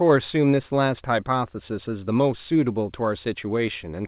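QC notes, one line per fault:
No faults found in this speech clip. The call path can be heard as a narrowband sound with nothing above 4 kHz, which fits a G.711 A-law codec at 64 kbps.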